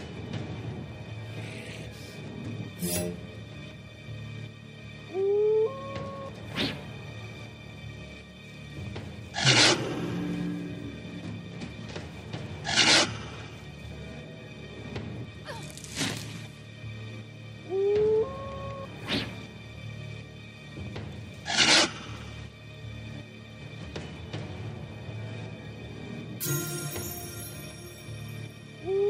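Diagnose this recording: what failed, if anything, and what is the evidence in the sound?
Nothing here points to a failure at any stage, and there's no fault to trace anywhere along the chain from the recording through to playback.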